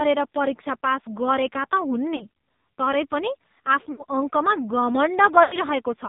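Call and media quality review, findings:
AMR narrowband mobile codec, throughout. Speech band-limited, nothing above 4 kHz. Heavy buzzy, synthetic coloration. Probable component: AMR-NB encoder at a low mode, which fits roughly 6 kbps. Mechanism: sparse pulse excitation through a vocal tract model. Too few bits for natural speech.

Lost AMR speech frames, at 2.16–2.24 s, 3.92–4.04 s and 5.44–5.57 s. Gaps of 40, 60 and 80 ms, which fits two, three and four lost 20 ms frames. Sound smears, then fades. Probable component: radio link into the AMR decoder. Mechanism: concealment repeats the last good parameters at falling gain.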